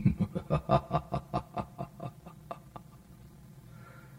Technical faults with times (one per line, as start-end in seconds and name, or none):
0.00-4.18 channel delay (comb filtering)